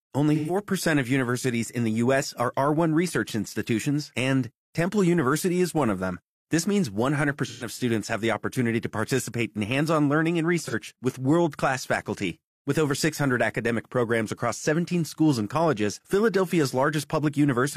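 Three brief smeared, noisy patches interrupt the speech: 0.35 to 0.57 s, just before "of universities in the"; 7.46 to 7.67 s, ahead of "students have the opportunity"; and a shorter one at 10.65 to 10.74 s, between "hands on learning and" and "with world class faculty". Each is AAC frame loss with concealment. About 128 ms went missing in the first two, which fits roughly three frames, and about 43 ms in the last, about one frame. The decoder bridged each gap by reusing the preceding spectrum rather than going silent.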